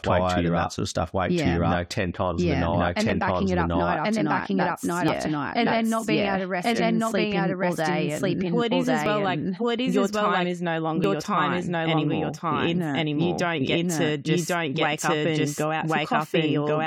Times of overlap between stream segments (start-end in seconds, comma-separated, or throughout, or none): 3.09, 5.08, 9.06, 11.04